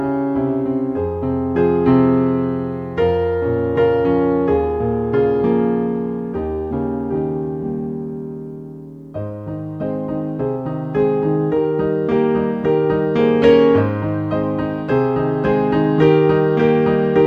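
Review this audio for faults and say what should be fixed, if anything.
No faults found; nothing to fix.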